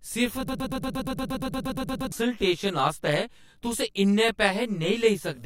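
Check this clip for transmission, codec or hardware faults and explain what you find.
Two faults are audible in this speech clip.

From 0.48 to 2.12 s there is a broken-record loop. A 117 ms fragment repeats 14 times back to back, likely from a stalled stream resending its last buffer, and the speech that should have played there is lost.

Throughout the clip there is channel delay (comb filtering). One channel lags around 20 ms, so the mono sum carries evenly spaced notches from about 30 Hz, giving a rough, slightly doubled sound.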